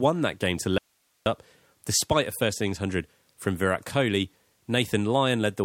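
The signal path likely lost its input briefly: an audio dropout to a faint residue from 0.78 to 1.26 s, after "that game to", leaves only hiss some 45 dB down until "despite a first innings".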